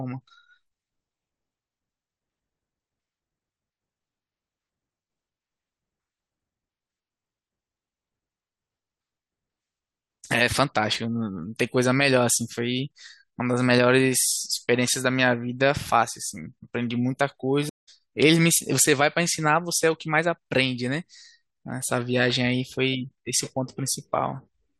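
A speech recording with a stream reconnect at 17.69 s. The sound drops out for 180 ms, until 17.89 s. The connection broke and the player restarted its decoder mid-stream. Playback resumes about 0.2 s further on, so that stretch is skipped.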